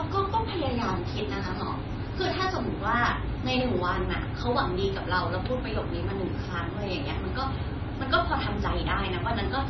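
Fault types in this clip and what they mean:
MP3 compression: The speech has nothing above 5.9 kHz, so the top end is cut off flat. Weak detail flickers from moment to moment, giving a watery, swirly sound. The damage is heavy, likely from MP3 at a low bitrate around 23 kbps.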